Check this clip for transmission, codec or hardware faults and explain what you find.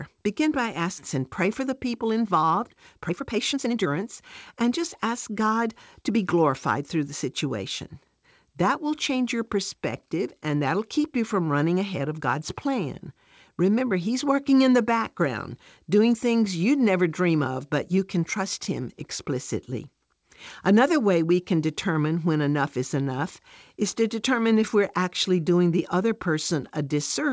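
Two transmission faults show up early in this speech, at least one from the receiver's jitter buffer. The audio also tops out around 8 kHz, which fits a wideband call codec like G.722.

Skip ahead at about 0.98 s: roughly a second and a half of audio just isn't there. Later packets were already queued, so that stretch was dropped, in transit or by the buffer, and playback jumped straight on. You hear an abrupt join with no gap, like a sloppy edit.

Jitter buffer speed-up from 1.18 to 6.34 s: playback runs at about 116% speed while the pitch stays put. The buffer was holding more audio than it wanted, so it kept trimming pitch-period-sized slices, around 0.7 s in total. The talker sounds hurried, then settles.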